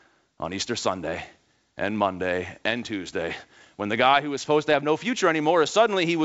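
No faults are audible in the speech, which comes through the G.722 wideband telephone path at 64 kbit/s with its normal bandwidth up to 7 kHz and at most a faint upper-band hiss.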